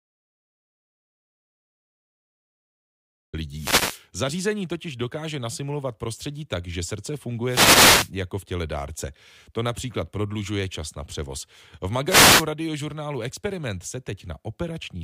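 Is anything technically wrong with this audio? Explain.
Yes, there are two kinds of fault in this speech clip.

The audio dropout to silence is already under way when the clip opens and lasts until 3.33 s. It is silent, with no room tone or hiss. The likely cause is that the input signal was lost, for instance through a disconnected device or an accidental mute, while the recorder kept writing zeros. Whatever was spoken during that stretch is gone.

Three wireless microphone noise hits follow, at 3.54 to 4.04 s, 7.47 to 8.11 s (between "prostředí tak že srdce" and "jako v těle dárce"), and 12.06 to 12.46 s. Each is a brief swish of static lasting roughly half a second. In an analogue FM radio link, reflected signals can cancel at the receiver, so the carrier fades and the receiver's own noise rises over the voice for the duration of the fade.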